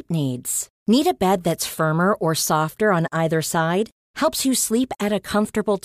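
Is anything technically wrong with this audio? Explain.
No, nothing technically wrong can be heard in this speech recording.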